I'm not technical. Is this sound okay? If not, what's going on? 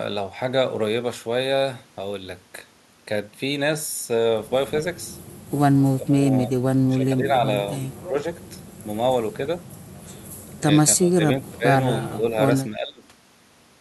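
No. Speech suppressed in double talk at 5.95–6.26, 6.44–6.51, 6.88–7.44, 7.99–8.18, 10.96–11.22, 11.39–11.66, 12.03–12.37 and 12.71–13.05 s: the voice suddenly dips in short chunks. Both sides likely spoke at once, and the call's echo remover, unable to tell them apart, turned this voice down too.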